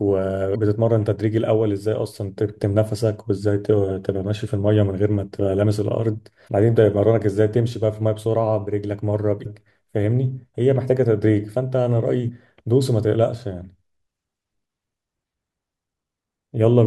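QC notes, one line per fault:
0.52–0.56 s, 6.45–6.48 s, 9.42–9.46 s and 12.25–12.29 s: damaged data in a compressed stream. Each is a brief glitch, about 40 ms long. Corrupted bytes in the encoded stream stop the decoder from reading those frames properly. It loses frame sync and has to search for the next valid frame header before clean decoding resumes.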